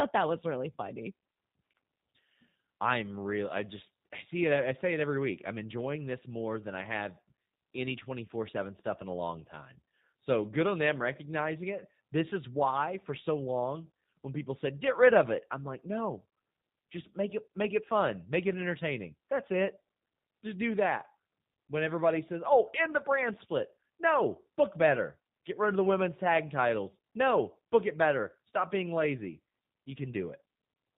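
From start to finish the speech carries G.729 codec damage, plainly audible. The encoder rebuilds each 10 ms frame from a vocal tract filter, a pitch predictor and a few pulses, so voicing sounds rough and faintly synthetic, with a buzzy edge, consistent with an 8 kbit/s VoIP link. On a spectrogram all energy stops abruptly at 4 kHz, leaving the band above empty, and harmonics look smeared rather than crisply striated.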